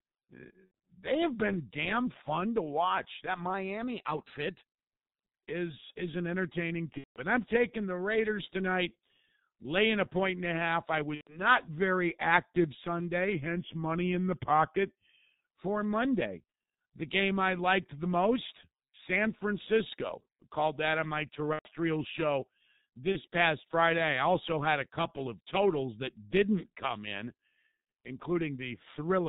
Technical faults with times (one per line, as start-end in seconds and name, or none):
0.00-29.28 G.723.1 codec
0.65-0.72 VoIP packet loss concealed by the speech codec
3.54-5.20 drift correction step
6.98-7.21 VoIP packet loss concealed by the speech codec
11.15-11.42 VoIP packet loss concealed by the speech codec
13.32-15.47 drift correction step
21.53-21.70 VoIP packet loss concealed by the speech codec
23.12-23.22 VoIP packet loss concealed by the speech codec